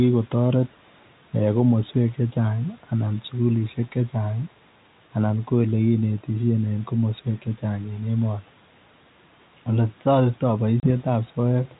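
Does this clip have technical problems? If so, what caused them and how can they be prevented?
Yes. Packet loss on an ADPCM call at 10.8 to 10.87 s, just after "ole taretii", leaves a hard-edged silent hole of about 30 ms, which fits a few lost packets. Unlike a simple dropout, the speech comes back slightly distorted, because the decoder's predictor and step size have drifted from the sender's and take tens of milliseconds to realign. A more reliable network link, plus packet-loss concealment that resets the decoder state, would prevent it.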